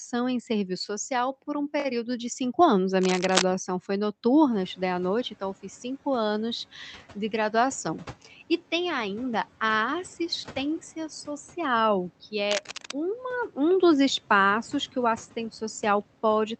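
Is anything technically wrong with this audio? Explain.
Yes, there are two kinds of fault in this speech clip: scratchy bursts at two points and a suppressor that briefly lets a noise rise through.

Cable scratch noise at 3.01 to 3.44 s and again at 12.50 to 12.92 s, just after "a assistência social que". This is likely a worn cable, plug or control being moved, so its contact resistance jumps about rapidly and dense, irregular crackle rides on the signal. The first burst is roughly as loud as the speech. The second sits a little below it. Both sound like scratching or rustling for under half a second.

Noise suppressor catching up from 4.52 to 5.25 s, just before "então eu fiz cinco". The room noise jumps by about 16 dB at around 4.5 s. The suppressor's estimate of the background lags behind that jump, so the louder noise passes through with little reduction at first. Over about 730 ms the estimate catches up and the noise sinks by about 8 dB, an audible swell followed by a fade.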